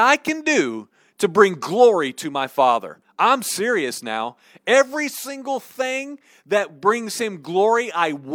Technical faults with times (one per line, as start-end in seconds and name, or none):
none